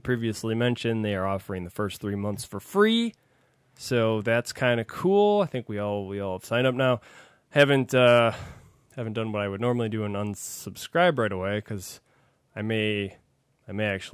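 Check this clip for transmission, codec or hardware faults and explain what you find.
No transmission, codec or hardware faults can be heard in this speech recording, and the signal holds steady throughout without any audible technical disturbance.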